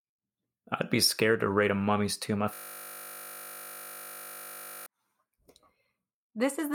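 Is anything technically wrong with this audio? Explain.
Yes. There is a system hang loop from 2.54 s to 4.86 s. The playback side stalled while the audio hardware kept reading the same small ring buffer, so one 20 ms slice of the speech repeats exactly, over a hundred times in a row. Because the slice is so short, the repetition fuses into a steady, mechanical buzz at 50 Hz in place of the speech, lasting a little over two seconds before normal audio resumes.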